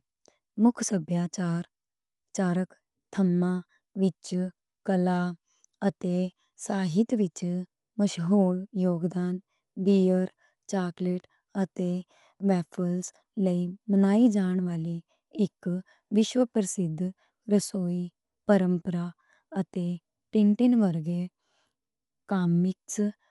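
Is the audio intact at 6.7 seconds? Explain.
No. At 6.7 seconds the speech is dull, with nothing above 11.4 kHz and rough, fluttering noise around tonal parts, as it is throughout. The likely cause is Dolby Digital compression at a low bitrate, which fits about 64 kbps. The encoder narrowed the band and left many frequency lines without detail, so the decoder filled them with noise.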